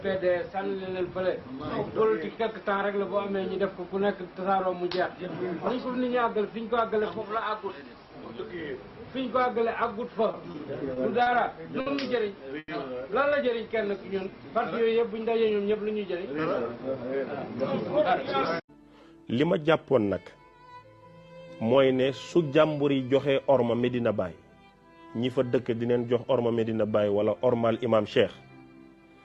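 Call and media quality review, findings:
Repeated stalls (stutter), 10.31–11.88 s. Five holds, about 170 ms filled in total, longest 60 ms. Jitter buffer ran dry repeatedly from late or slow packet arrival. Last sound extended each time. Nothing lost, but the sound drags.

Short stall from a late packet, 12.59–12.70 s. One sound held for 90 ms. Jitter buffer empty when the packet was due. Receiver stretched the previous sound, then resumed at the same point. Overall delay up 90 ms afterwards.

Jitter buffer slow-down, 13.91–14.43 s. Sound plays at 90% speed, pitch unchanged. About 62 ms added by repeating single pitch periods and pause fragments. Buffer rebuilding its reserve. Sounds drawn out.

Jitter buffer speed-up, 16.3–18.83 s. Sound plays at 106% speed, pitch unchanged. Around 150 ms removed in small cuts of one or a few pitch periods. Buffer over target, trimming excess delay. Audibly hurried.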